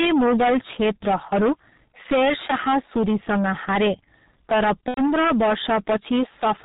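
Throughout the speech, the level is driven about 18 dB past what the signal path can carry. This hard clipping slices the peaks flat on nearly a third of the waveform, spraying high harmonics that turn every loud syllable into a harsh, gritty fuzz rather than occasional crackle.

The whole clip has also passed through the G.723.1 codec, at a rate that fits its 6.3 kbit/s mode. Nothing survives above 4 kHz, and the slow-updating voice model heavily smears the sound, leaving it muffled and hoarse, with consonants blurred together.

From 4.88 to 5.01 s, packets drop out, about 90 ms of audio, which fits three lost 30 ms frames. This is VoIP packet loss concealed by the speech codec. The decoder stretches its last pitch and filter into a fading sound, muted from the third lost frame, and the speech stays weakened and distorted briefly after the stream resumes.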